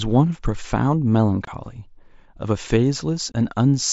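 Unconcealed Bluetooth headset packet loss at 1.45 to 1.48 s and again at 3.32 to 3.34 s: each time the speech drops out for about 22.5 ms, which fits three consecutive 7.5 ms mSBC frames failing to arrive from the headset. Nothing fills the gap, so silence or an idle pattern replaces the missing audio. Each hole has hard edges as the speech cuts off and resumes. The wideband mSBC link itself carries the speech with only light grainy codec texture.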